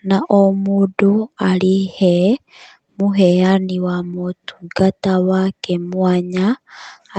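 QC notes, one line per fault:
No faults to note, one line or otherwise, for this speech clip.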